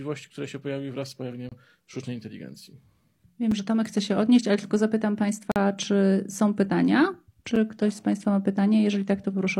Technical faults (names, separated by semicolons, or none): gap between stream segments